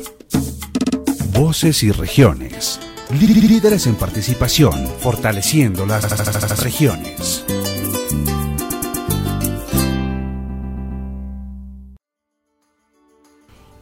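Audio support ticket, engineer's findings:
Repeated frames, five spots: 0.77, 3.25, 6.03, 8.69 and 10.48 s. Stutter where a short block loops: a 58 ms chunk played 3 extra times, 70 ms ×4, 78 ms ×7 (about 0.55 s added), 109 ms ×3, 139 ms ×4. Probable component is the packetiser or file writer resending a run of compressed frames, and the decoder just plays them again. The clip runs long by roughly 1.9 s total.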